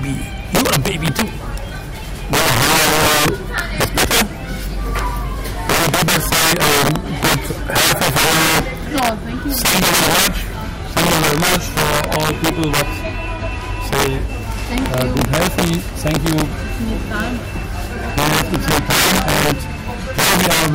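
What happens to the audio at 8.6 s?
At 8.6 s you're hearing integer overflow, present through the whole clip: loud peaks driven about 13 dB too hot wrap to the opposite sign, giving harsh cracks.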